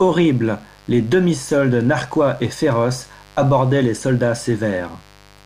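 Mains buzz at 50 Hz runs throughout, about 30 dB below the speech: switching spikes every half-cycle leave harmonics into the kilohertz range, heard as a steady raspy buzz.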